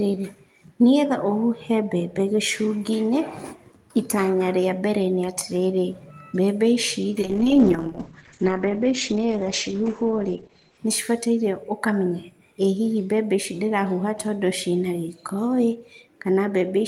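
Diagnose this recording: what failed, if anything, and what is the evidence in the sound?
The fault is a call bitrate drop, at the codec stage, triggered by the network. From 7.23 s to 10.85 s the speech loses its top end. The audio bandwidth narrows from about 20 kHz to 8 kHz. The voice sounds muffled and coarse, with a rough, watery texture. It stays at its worst for about 3.55 s. The sound fits the encoder falling from roughly 32 kbps to 9 kbps after the bandwidth estimate collapsed. Detail returns once the rate recovers.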